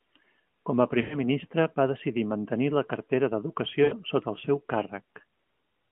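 At 1.02 s and again at 3.84 s, lost AMR speech frames interrupt the speech. In each case about 80 ms of frames failed, and the decoder stretched the last good pitch and vocal tract settings with falling gain. The result is a brief drawn-out, fading smear before the speech returns, weak or rough for a moment.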